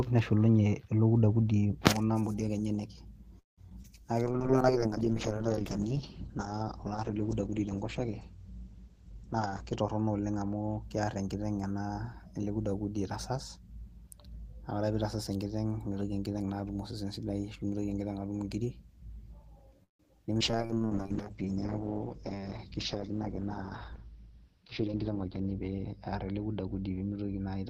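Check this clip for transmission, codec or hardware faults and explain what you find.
Several transmission faults occur, clustered in two bursts around 3.4 s and 19.8 s.

Repeated packet loss (robotic sound), 3.39–3.87 s and 19.84–20.43 s: three gaps each, the longest 181 ms and 158 ms. The receiver extends the last sound into each hole, so the speech turns choppy, with pieces missing.

Jitter buffer slow-down, 3.98–4.57 s and 20.51–20.96 s: to rebuild its reserve, the buffer repeats pitch periods, adding 69 ms and 63 ms. The speech plays at 89% and 88% speed, drawn out but at unchanged pitch.

Call bitrate drop, 4.26–10.90 s and 20.42 s to the end: the bandwidth estimate fell, pushing Opus from 32 kbps down to 9 kbps and, in the second drop, to 8 kbps. Bandwidth narrows from 20 kHz to 8 kHz and 6 kHz, so the speech becomes muffled and rough.

Jitter buffer speed-up, 9.07–10.50 s and 22.07–24.90 s: the buffer trims excess delay, removing roughly a fifth of a second and somewhat less. 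The speech runs at 113% and 105% speed, sounding hurried at the same pitch.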